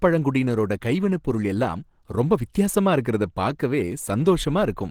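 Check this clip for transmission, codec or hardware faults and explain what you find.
One fault runs through the whole speech clip: Opus compression, likely from a low-rate encode around 16 kbps in the codec's hybrid speech mode. The lower band is coded as speech while upper bands are rebuilt from band energies, leaving the voice plainly muffled and hoarse, with a rough, grainy texture. A spectrogram shows content reaching about 20.2 kHz, but the upper region looks smeared and noise-like rather than harmonic.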